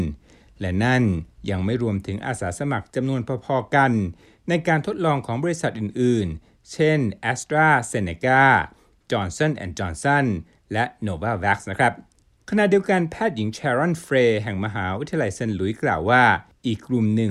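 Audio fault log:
No faults heard.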